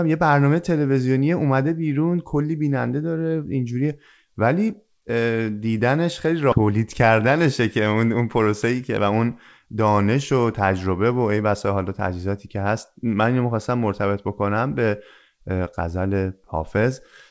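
At 6.52 s there's a skip ahead: roughly 0.7 s of speech just isn't there, and playback jumps straight to later audio with no fill at all. That points to a chunk being lost in transit or thrown out by the jitter buffer when it overflowed while newer audio was already queued. The two sides get butted together almost directly, so you hear an abrupt splice and the speech lurches forward.

Right after, from 6.61 to 9.13 s, you get a jitter buffer speed-up. The buffer was sitting on more audio than it wants, so the receiver kept trimming short pitch-period-sized slivers to pull the delay back down. Playback runs about 9% fast, shaving off something like a fifth of a second in total. The pitch stays put, but the talker sounds noticeably rushed through that stretch. All of this sits on a band-limited call path with nothing above 8 kHz, which fits a G.722 codec at 64 kbps.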